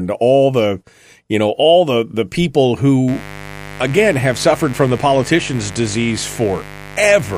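A steady, raspy buzz enters at 3.08 s and continues to the end of the speech, sitting only roughly 15 dB below it. This is mains buzz at 50 Hz: sharp switching spikes from something like a dimmer, a rectifier or an unshielded cable get into the signal twice in every mains cycle, and their harmonics of 50 Hz climb well into the kilohertz range, giving the edge a plain hum lacks.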